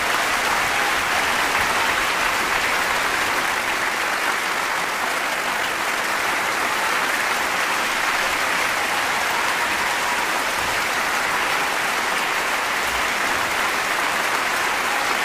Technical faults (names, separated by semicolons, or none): time-stretched section